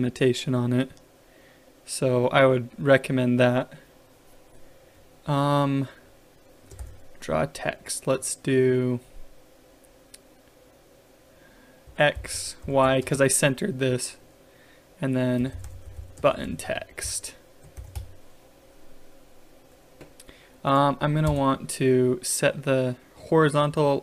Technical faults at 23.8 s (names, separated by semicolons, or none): none